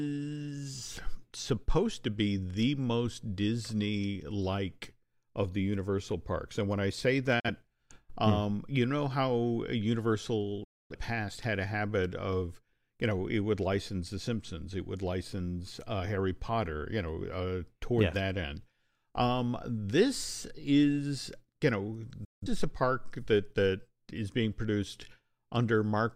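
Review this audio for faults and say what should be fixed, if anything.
The speech cuts briefly to silence at 7.40–7.50 s, 10.64–10.96 s and 22.24–22.47 s, each time with a very fast fade. This is digital broadcast dropout: the receiver muted when it lost or rejected corrupted frames. Improving the signal at the receiver and adding stronger error protection on the broadcast link would prevent these gaps.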